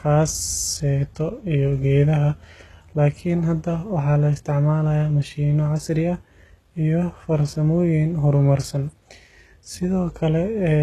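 Across the whole speech clip, the top end sounds synthetic. Sibilants come out gritty and lispy, with a metallic sheen. Nothing is left above about 12.3 kHz. This points to HE-AAC compression at a very low rate, likely around 16 kbps. The codec keeps only the lower spectrum. It rebuilds the treble by copying lower bands upward under a coarse envelope. The rebuilt harmonics don't line up with the real ones, so the damage is plainly audible.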